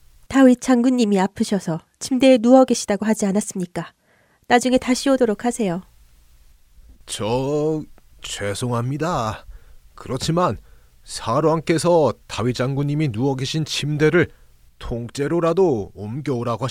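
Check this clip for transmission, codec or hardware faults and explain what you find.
No transmission, codec or hardware faults.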